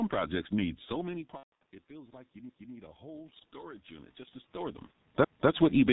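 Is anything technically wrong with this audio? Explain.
Yes, there are a few problems stacked up here.

The whole clip carries G.723.1 codec damage, and it's heavy. This old telephony codec chops speech into 30 ms frames and squeezes it hard. The texture points to its 6.3 kbit/s mode. Nothing gets through above 4 kHz, and the codec's voice model can't keep up with fast changes. The result is muffled, rough and hoarse, and consonants smear into each other instead of landing crisply.

Right after "projects need so many", from about 1.37 to 1.63 s, there's VoIP packet loss concealed by the speech codec. Around 210 ms went missing, scattered over 240 ms, with the longest gap 150 ms. That fits roughly seven lost 30 ms frames. The decoder kept stretching its last pitch and filter at falling gain, so you hear a buzzy, fading smear, and it sounds weak for a bit after real audio resumes.

From about 1.87 to 4.84 s you get automatic gain rising. 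The talker shifted position, which is natural, and the input level fell by about 21 dB. The gain control responded by slowly pushing its gain up about 6 dB. Voice and room noise swell together over those three seconds, so the background creeps up along with the speech rather than staying put.

Then there are overlapping chunks, at 2.49 to 2.75 s and again at 5.24 to 5.50 s. The audio was handled in 2.5 s chunks, and each new chunk started 250 ms before the previous one finished. So a quarter-second slice plays twice at each join, heard as a stutter. The two repeats land about 2.75 s apart.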